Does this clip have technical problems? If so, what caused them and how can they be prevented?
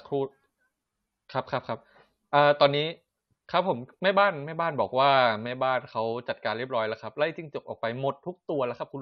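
No, no technical faults detected.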